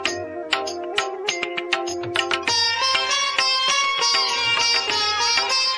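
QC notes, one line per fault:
No faults were heard in the audio on this pass.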